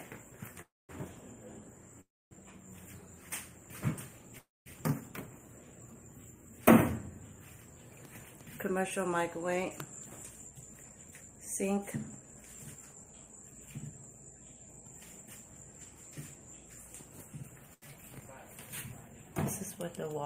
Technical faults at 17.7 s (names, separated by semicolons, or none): short stall from a late packet